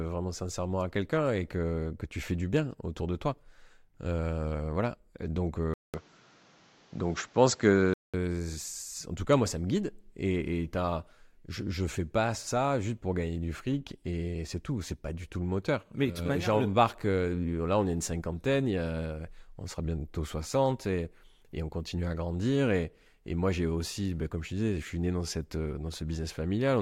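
Speech; from 5.74 to 8.14 s the sound goes dull and boxy, with nothing above 7.7 kHz, a level shift of about 5 dB, a new noise floor roughly 35 dB down and a 200 ms gap at the switch, likely an input switched to a poorer device.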